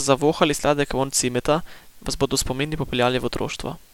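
Throughout, the speech carries a constant, even hiss from low bit depth with dither. The coarse rounding, consistent with a 9-bit word length, is randomised by dither into steady white noise roughly 35 dB below the speech, with no distortion added.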